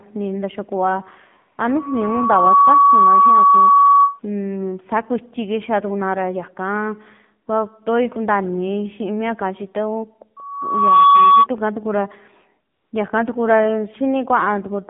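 AMR narrowband mobile codec damage runs throughout: the speech is confined to 150 Hz to 3.7 kHz, with a plainly buzzy, synthetic quality that fits a low bitrate near 7.4 kbps. AMR comfort noise appears from 12.74 to 12.92 s: for 180 ms the sender stopped transmitting speech frames, and a smooth, steady synthetic hiss replaces the real background.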